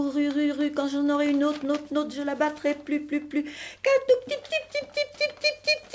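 No faults to report; the audio comes through a call path whose codec leaves nothing above 8 kHz, consistent with a wideband coder such as G.722.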